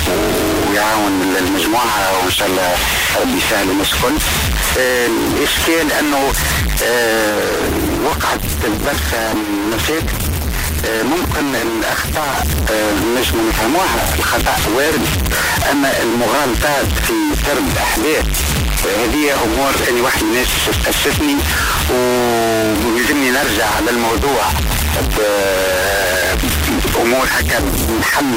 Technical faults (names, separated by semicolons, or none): stuck bit; call bitrate drop